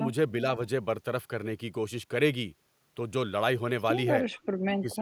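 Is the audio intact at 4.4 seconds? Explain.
No. From 4.37 to 4.46 s there is an echo leak: a faint delayed copy of the speech, very low against the direct sound, arriving about 431 ms late. The likely cause is a far-end loudspeaker whose echo canceller let some microphone pickup through.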